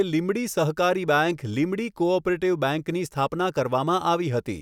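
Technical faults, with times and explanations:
No technical faults detected.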